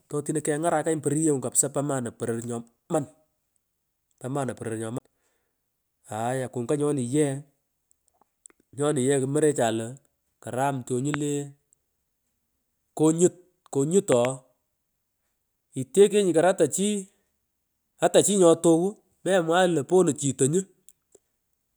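A CD skip interrupts the speech from 4.98 to 5.00 s. A knock or a flaw in the disc threw the laser off its track onto another turn of the spiral, so the player muted for around 20 ms and then resumed reading from a different point on the disc. The result is a small tick and a short gap, after which the speech carries on from a displaced position rather than continuing smoothly.

A loud pop strikes at 11.14 to 11.16 s, a single sharp pop peaking some 15 dB above the speech. A second loud pop follows right after "kenya konyut", from 14.12 to 14.27 s, and this time it is a double pop in quick succession at a similar level. In both, the speech continues underneath. The likely cause is a sudden voltage step or spike, such as a plug contact, a switch, static discharge or a driver glitch. The circuitry downstream shaped that step into the thump heard here.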